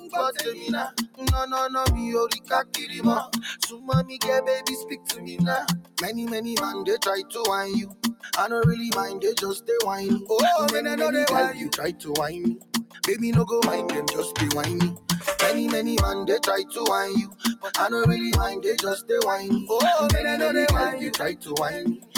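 A noise suppressor applied to music or sounds stays engaged across the whole clip, treating sustained content and decays as noise and pulling them down by around 15 dB while onsets pass. The result pumps and thins. On a spectrogram, energy flickers between bright attacks and dimmed held regions; the waveform envelope breathes unevenly.

The sound is cut by the noise suppressor at 0.00–1.25 s, 2.33–5.98 s, 7.23–10.30 s, 11.53–13.03 s, 16.64–17.63 s, 19.02–19.70 s and 21.33–22.17 s. The dips reach about 16 to 17 dB but last only part of each span. Tails collapse early, which shows as abrupt waveform notches and darkened spectrogram patches.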